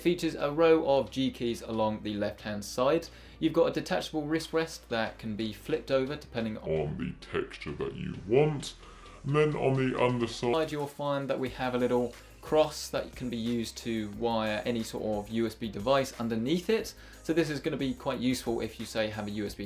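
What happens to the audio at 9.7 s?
At 9.7 s the audio falls inside a wrong sample rate fault running from 6.66 to 10.53 s. The samples are being clocked out more slowly than they were captured, with no rate conversion, a ratio that fits 44.1 kHz material played back at 32 kHz. Everything in that span runs at 0.726 times normal speed and drops about 5.55 semitones in pitch, so the sound comes out noticeably lower, heavier and dragged.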